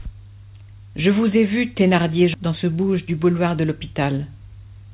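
A speech clip carried over a call path whose G.711 A-law coding, fitting a 64 kbps narrowband stream, leaves nothing above 4 kHz. At 2.34 s a stretch of queued audio was dropped, a skip ahead of around 0.7 s. Playback jumps straight across with no fill, so that portion of speech is simply gone and the two sides butt together. From 2.46 to 3.48 s the buffer, still holding excess audio, ran a jitter buffer speed-up at 111%, snipping out pitch-period slices totalling about a tenth of a second. The speech sounds hurried there, though its pitch stays unchanged.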